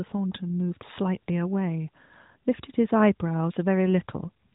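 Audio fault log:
The speech signal shows no technical faults, and it passes through the AMR narrowband mobile codec in the 12.2 kbps mode with only light coding effects, with nothing present above about 3.8 kHz.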